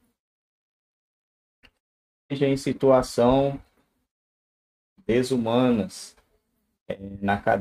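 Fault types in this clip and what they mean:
Repeated packet loss (robotic sound): From 1.31 to 1.72 s, four short holes, the longest 32 ms, were patched by extending the preceding sound, covering about a quarter of that span. This gives a choppy texture. A spectrogram shows brief smeared or repeated slices breaking the normal pattern.
Long network dropout: From 1.78 to 2.33 s the sound drops out for about half a second, nearly all of it silent. The likely cause is a long network dropout, and the audio resumes without the lost part. The waveform goes flat and the spectrogram shows an empty vertical band.
Sample clock jitter: From 5.19 s to the end, the converter's clock wanders by around 2 microseconds, so each sample is taken slightly off time. The error scales with waveform slope and sits roughly 40 dB below the signal, appearing as a broadband noise haze tracking the sound's energy.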